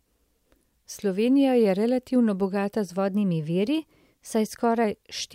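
At 2.98 s, right after "je relativno bogata z", the speech jumps about 5.4% faster and roughly 91 cents sharp, close to a semitone, holding until 4.84 s before snapping back. This drift correction step is likely a clock-matching stage abruptly changing playback rate to manage its buffer. Unlike tape wow, the shift is a single flat step rather than a wobble, and unlike a pitch shifter, tempo and pitch move together.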